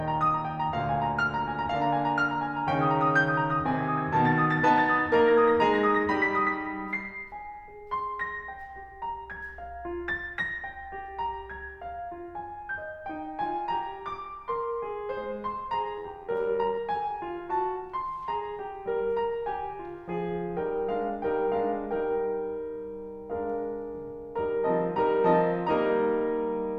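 From 15.98 to 16.78 s the music carries overlap-add ripple. The signal was split into windowed frames and rebuilt with an overlap whose windows don't add up to a steady gain, so the level dips and swells about 6 dB once per frame, at around 100 Hz. It sounds like a metallic buzz with extra tones around each note. On a waveform the envelope shows a regular scalloped pattern. A spectrogram shows vertical striping at that frame rate.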